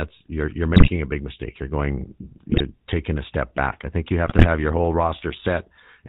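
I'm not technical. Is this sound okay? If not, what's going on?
No. GSM full-rate codec damage runs through the whole clip. This is the original mobile-phone voice coder, which doesn't store the sound itself. It stores a rough description of the throat and mouth shape plus a simple pulse pattern, then rebuilds the speech from that. Everything above 4 kHz is gone, so the speech sounds muffled, and the rebuilt pulses give it a clearly buzzy, gravelly roughness.

GSM bit errors appear at 0.74 to 0.90 s, 2.50 to 2.61 s and 4.26 to 4.46 s. In each of these short bursts, some of the digital data got scrambled on its way to the decoder, as happens on a weak mobile signal. The decoder then rebuilt the speech from wrong settings for tone, pitch and loudness. That is why the speech briefly breaks into squawks, pops and gargling before recovering.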